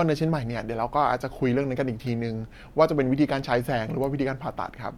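No technical faults can be heard anywhere in the recording, so there are none to describe in time order.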